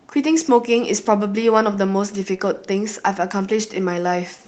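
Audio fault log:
No faults heard in this speech clip.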